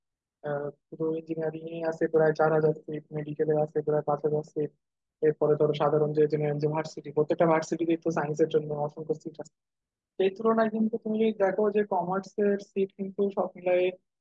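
No dropouts, clipping, glitches or other technical faults are audible in this speech recording.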